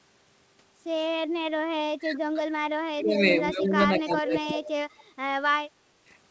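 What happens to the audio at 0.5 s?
At 0.5 s the speech is intact, with no dropout, glitch or other fault at that moment.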